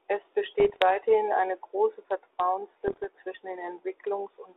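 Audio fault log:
0.6–0.82 s and 2.87–3.06 s, bit errors on an ADPCM link: rough crackly bursts with pops and brief level jumps, the first ending just before "eine große". A few tenths of a percent of flipped bits knock the decoder's step size and prediction off, so each error rings on briefly.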